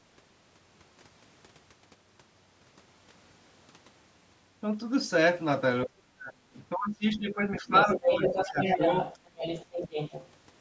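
From 5.85 to 8.21 s the talker's speech drops out in pieces, totalling about one and a half seconds and falling by around 35 dB at its deepest. This is speech suppressed in double talk, likely from the echo canceller failing to tell near speech from loudspeaker echo and attenuating both. From 7.77 to 10.3 s the other side's voice leaks through at roughly the talker's own level, likely because the canceller left residual loudspeaker echo in the microphone path. A second, briefer suppression at 8.46 to 8.6 s pulls the speech down by about 10 dB.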